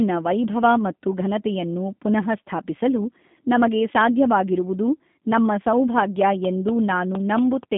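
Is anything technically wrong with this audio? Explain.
Yes, two faults. Throughout, the speech sounds narrow, thin and slightly rough and synthetic, with a buzzy, processed edge. This is G.729 codec damage. At 8 kbit/s, the codec discards the actual waveform and resynthesises each 10 ms frame from a vocal tract filter, a pitch estimate and a few pulses. The line passes only about 150 Hz to 3.6 kHz, with nothing above 3.8 kHz, so sibilants and brightness are gone.

From 5.98 s to 7.64 s, just after "ಪುನಃಸ್ಥಾಪಿಸಲು ನಮಗೆ ಸಾಧ್ಯವಾಗಿರುವುದು ನಮ್ಮ", a train of clicks ticks over the speech. There are about seven similar pops, evenly spaced at 4.24 per second. They peak roughly 10 dB above the speech, so they stand out sharply. Such a steady repeated pulse is likely caused by electrical interference or a faulty connection injecting a spike at a fixed rate.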